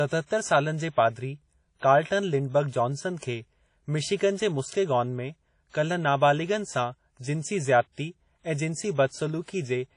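Throughout, the speech has a ringing, washy smear and breathing hiss that points to WMA compression, likely at a low bitrate around 32 kbps; spectrograms show gappy, zeroed bands and nothing above 10.1 kHz.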